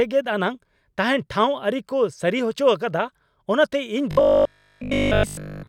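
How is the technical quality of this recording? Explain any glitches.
The recording breaks down near the end. From 4.11 s to 5.67 s, new audio likely stopped arriving in time, so one short buffer, about 20 ms long, was replayed over and over instead. That gives robotic sound from repeated short buffers: the speech becomes a rigid, metallic 50 Hz buzz.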